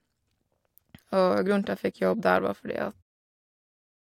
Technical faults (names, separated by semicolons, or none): none